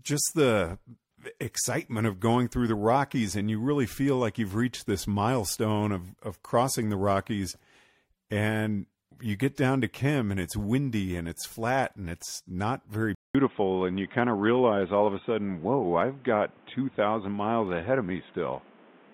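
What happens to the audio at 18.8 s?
From 13.15 s to the end, the speech is band-limited to 3.8 kHz, dull and boxy, with a fresh noise floor after a 200 ms gap, likely an input switched to a poorer device.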